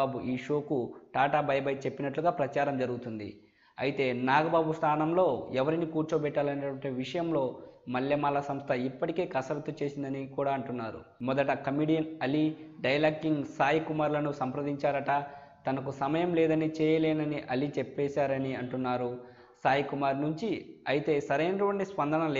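No technical faults are audible.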